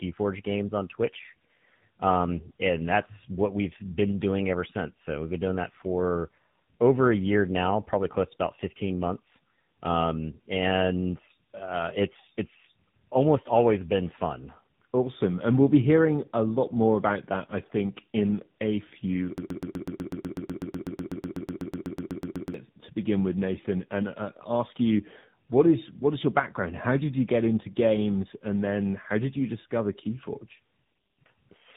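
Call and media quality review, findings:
Rough, muffled, warbly sound for the whole clip, with nothing above 3.8 kHz. Tandem speech coding: GSM full rate, then G.711 mu-law, then AMR-NB at 10.2 kbit/s. Two speech coders in a row, the second re-coding the first one's artefacts.

Stutter from 19.38 to 22.54 s, after "think in a few" and before "to begin with". Broken-record loop: a 124 ms fragment repeats 26 times back to back. Likely a player or stream stall re-sending its last buffer. The audio for that span is lost.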